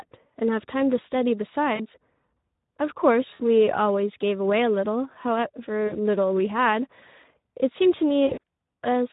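Across the whole speech clip runs Speex codec damage, plainly audible and consistent with a rate around 11 kbps. The voice sounds hoarse and grainy because the coder has too few bits to describe the excitation, leaving a noisy rasp under every syllable. Unlike the watery, swirling artefacts of a transform codec, this roughness follows the pitch itself, and any top end above 4 kHz is a shaped hiss rather than real detail.

Over that, VoIP packet loss concealed by the speech codec appears at 1.75 to 1.87 s, 3.33 to 3.41 s, 5.87 to 5.94 s and 8.27 to 8.38 s. The first and third lose about 40 ms of audio and the second about 60 ms. The last is a scatter of short losses spread over about 160 ms, none longer than 40 ms. At each point the decoder keeps repeating its last pitch and filter at falling gain, so the sound smears into a fading buzz or coloured noise. Because every frame builds on the previous one, the voice stays weak or distorted for a short while after the packets return. 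A plain dropout would give silence or a click, not this stretched tone.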